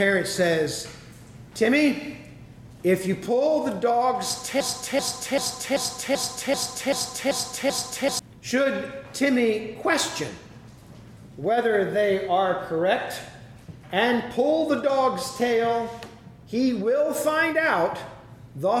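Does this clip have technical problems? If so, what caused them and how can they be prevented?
Yes. From 4.60 s to 8.19 s the audio turns into a broken-record loop: a 0.39 s fragment plays nine times back to back, each repeat identical, and the material that belonged in those three and a half seconds never arrives. The likely cause is a player, encoder or stream that stalled and kept resending its last buffered piece. Unlike an echo, the repeats don't fade, and unlike a brief stutter, the loop persists for seconds. A stall watchdog that outputs silence or resyncs instead of replaying stale data would prevent it.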